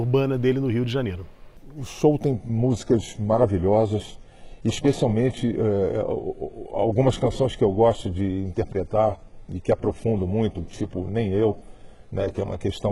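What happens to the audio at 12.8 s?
At 12.8 s you're still inside a stretch where the adaptive stream dropped to a lower bitrate, which kicks in abruptly at 2.32 s and runs right to the end of the clip. The player switched to a much leaner encode, likely because the connection slowed, with no gap at the changeover. The top end is cut off above about 11.5 kHz, and the thin treble points to an HE-AAC stream somewhere around 12 kbit/s, down from roughly 96 kbit/s before the switch.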